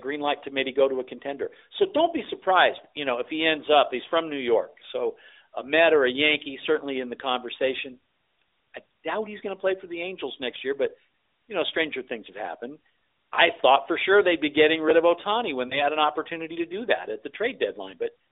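Speech heard through a narrowband mobile channel, with the band running roughly 300 Hz to 3.7 kHz and only light, fairly clean codec colouring, which fits AMR-NB at its higher 12.2 kbps rate. At 15.68 s there are lost AMR speech frames. The sound briefly dips or warbles, then recovers by 15.83 s. The gap is short, pointing to a single 20 ms frame. The decoder filled it by repeating the previous frame's settings at reduced gain.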